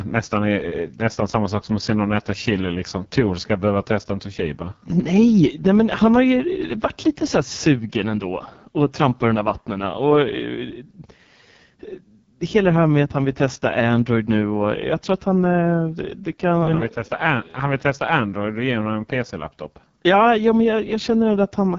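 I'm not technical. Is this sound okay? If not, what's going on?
No. Throughout the whole clip the speech has passed through the AMR wideband (HD Voice) codec, the compression used for HD mobile calls, at what sounds like one of its lowest settings. The voice is rough and raspy, and the top end stops around 7.5 kHz. A simply muffled recording would sound dull but smooth. This one is grainy and buzzy, because the codec is rebuilding the voice from too little information.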